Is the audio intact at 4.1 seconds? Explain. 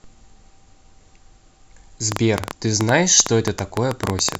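No. A train of clicks runs from 2.12 to 4.36 s, about 9 per second, unevenly spaced, same-shaped pops well above the speech, likely interference. Their repeated, near-identical shape separates them from random crackle.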